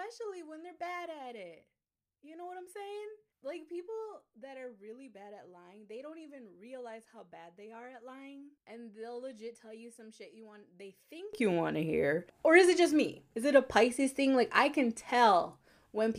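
From the start to about 11.33 s, the speech sounds faint. That's the classic sign of one channel inverted, and a polarity flip on one side is the likely cause. Anything shared between left and right cancels out, so the centred voice drops away, roughly 21 dB down, leaving just a faint residue of whatever differs between the channels.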